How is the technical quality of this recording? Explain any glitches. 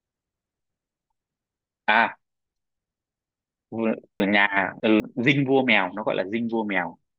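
The recording has two glitches, both chunks out of order: a 200 ms block arrived late and played two chunks behind its place from 0.6 to 1.2 s, and three chunks behind from 4.2 to 5.0 s. Nothing is lost, but the speech sounds briefly jumbled.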